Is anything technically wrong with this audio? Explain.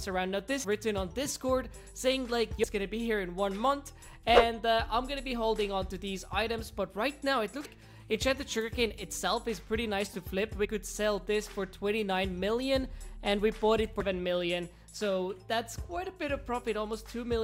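Yes. Five brief chirps or squawks break into the audio, at 0.63–0.65 s, 2.63 s, 7.64–7.66 s, 10.64–10.66 s and 14.00 s, each lasting about 14–22 ms. These are damaged data in a compressed stream: bytes in the encoded file were lost, zeroed or overwritten, so the decoder misread those frames, lost sync and hunted for the next valid frame header, producing a short garbled blip each time.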